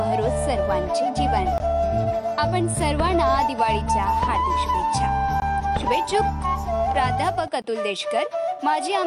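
Output buffers likely went unfilled in time, so three 20 ms blocks of digital silence cut this audio at 1.58, 5.40 and 7.62 s, each heard as a brief hole.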